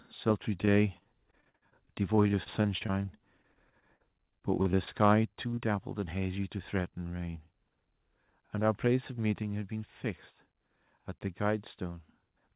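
A short speech recording that came through a call path with a hard band limit (nothing above 4 kHz, consistent with G.711 mu-law at 64 kbps, so the spectrogram is blank above that line throughout) shows several network and microphone faults. From 0.62 to 4.89 s there is repeated packet loss with a robotic sound. The speech turns choppy and robotic as 32 separate gaps are patched by extending the preceding sound, the longest about 60 ms, with roughly 15% of that stretch being filler rather than real audio. On a spectrogram this appears as repeated short blocks where the harmonics freeze into flat, smeared bands instead of following the speech, and the waveform shows repeated, slightly mechanical cycles in place of natural variation. At 5.03 to 5.14 s the loudest syllable picks up a harsh, crackly edge, with peaks about 2 dB over the converter's limit and a small share of samples flattened. 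The likely cause is microphone overload, where the input gain was set too high for the converter. In the waveform the peaks are squared off at the rail, and the spectrogram shows a brief vertical spray of distortion energy up to the band edge. Just after that, at 5.25 s, the whole signal, speech and background alike, drops by about 4 dB in a single step, and a second drop of about 3 dB follows at 9.43 s. These are likely a microphone volume step-down by the call software reacting to input it found too loud. The waveform envelope shows them as sudden, clean steps down in amplitude, and the spectrogram as an abrupt darkening across all frequencies at once. At 5.51 to 5.59 s two back-to-back short concealed packet losses, each around 20 ms of missing audio, produce a brief smeared wobble as the decoder bridges the holes with continued sound and then crossfades back. On a spectrogram this is a small patch of blurred, stretched harmonics, and in the waveform a short run of repeated periods. 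Finally, from 10.07 to 11.10 s a jitter buffer speed-up shortens the audio by around 50 ms to catch up on delay, cutting out small pitch-period slices so the speech runs about 4% faster at the same pitch. A spectrogram shows the same harmonic spacing with syllables packed a little closer, and the waveform has tiny splice points where cycles were dropped.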